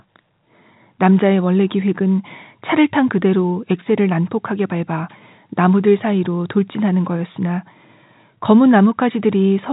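No technical faults turn up anywhere in this speech recording. It runs over a working G.711 telephone path, so the sound stops at about 3.8 kHz and any coding damage is faint at most.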